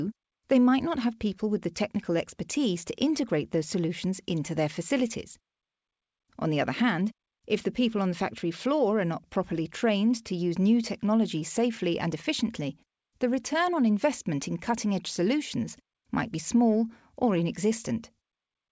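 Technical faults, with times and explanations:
No technical faults can be heard in this speech.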